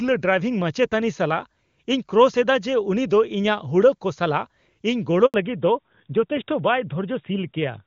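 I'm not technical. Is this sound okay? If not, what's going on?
No. At 5.26 seconds the speech cuts out completely for about 80 milliseconds, until 5.34 seconds. The sound fades in a few hundredths of a second, then there is dead silence, and whatever was said in that moment is gone. This is a handover gap: the phone switched the call from one network to another, and during the changeover no speech reached the other end.

From 5.34 seconds to the end, the speech sounds duller, more muffled and rougher, as if heard through an old landline. Before the switch the call ran on HD Voice, which carries the crisp upper sounds clearly. Afterwards it falls back to narrowband, an older phone format that keeps nothing above 4 kHz. The airy, sharp parts of speech such as s and f sounds lose their brightness for the rest of the clip.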